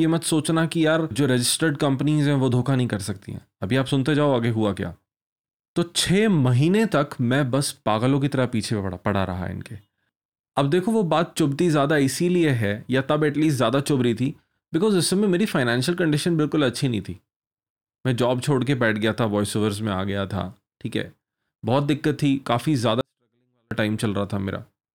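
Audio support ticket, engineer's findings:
24-bit alignment error (too quiet), 23.01–23.71 s. Speech drops about 48 dB instantly, clean but near-inaudible. Capture/conversion stage: 24-bit samples sitting in low bytes of 32-bit words read as full 32-bit integers, losing top byte of scaling. Level snaps back after 23.71 s.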